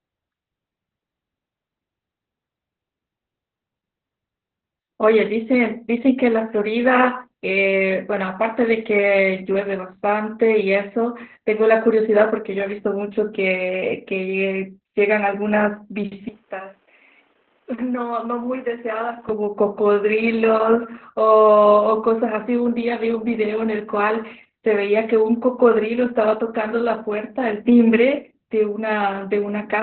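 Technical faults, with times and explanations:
Throughout, Opus voice compression: the encoder runs its SILK linear-prediction coder in narrowband mode at a very low rate, which fits an 8 kbps stream, so it discards everything above about 4.4 kHz and codes the excitation signal coarsely. The speech sounds muffled and boxy, without sibilant crispness, and the damage is heavy, with a hoarse, buzzy, slightly robotic quality because the rough excitation can't reproduce natural vocal texture.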